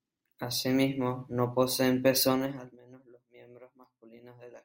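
From 2.25 to 2.82 s, just after "mismo no poseen", a level drop of roughly 25 dB is applied in unsmoothed 2 dB steps, around twenty a second, instead of as a continuous glide. Each jump clicks, so zipper noise ticks audibly through the speech as it fades.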